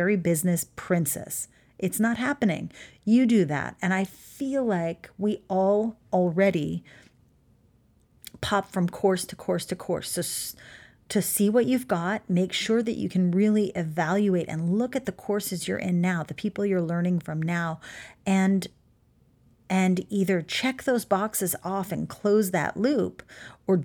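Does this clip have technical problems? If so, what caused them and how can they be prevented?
No, the speech in this clip shows no technical faults, so there is nothing here to trace to a cause or to guard against.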